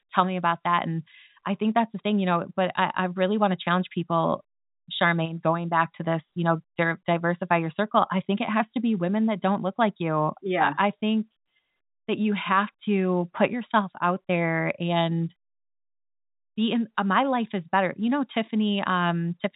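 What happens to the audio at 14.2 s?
Nothing goes wrong at 14.2 s: the speech carries on intact through that moment, heard through its telephone-band coding.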